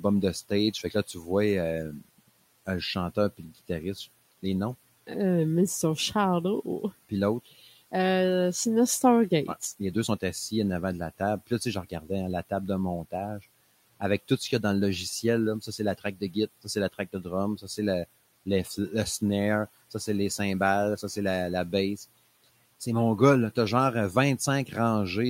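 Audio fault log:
0.00–3.69 s, speech cut by the noise suppressor: soft consonants and endings dip by up to about 19 dB, roughly 0.4 s in total, as the suppressor treats them as noise.
7.09–7.93 s, same fault: a brief stretch drops by up to about 14 dB.
9.61–24.72 s, same fault: scattered losses of up to about 16 dB, about a second altogether, sounding swallowed against room noise about 23 dB below the speech.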